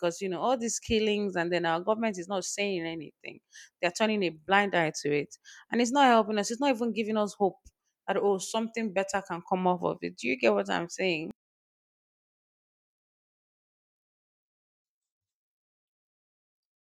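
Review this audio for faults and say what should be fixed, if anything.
From 11.31 s to the end at 16.8 s, right after "you get what I'm", the speech collapses to a faint trace, dropping by about 34 dB on mono playback. This is likely one channel inverted: with one stereo side's polarity reversed, the centred speech common to both channels cancels when they are summed, leaving only their small difference. Checking polarity on every channel and monitoring in mono before export would prevent it.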